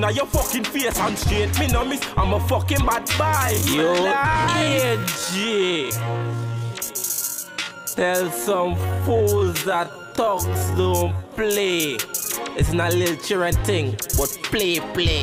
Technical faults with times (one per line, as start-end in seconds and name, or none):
3.05-11.89 time-stretched section